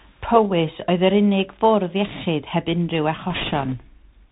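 A speech clip carried through the Bluetooth CVSD headset codec, whose one-bit delta coding, consistent with a 64 kbps link, leaves nothing above 4 kHz. S sounds turn scratchy, loud high passages distort as the step size lags, and a granular hiss sits underneath. On a spectrogram everything stops sharply at 4 kHz over a grainy floor. From 3.30 to 3.74 s, bit errors on a Bluetooth voice link add a rushing crackle without sharp clicks, since each flipped bit carries little weight. The error rate is around one and a half percent. This shows as a broadband speckled patch on the spectrogram and a fuzzy thickening of the waveform there.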